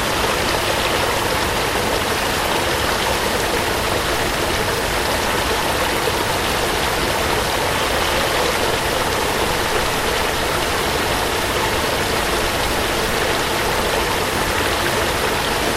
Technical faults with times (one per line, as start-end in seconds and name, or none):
none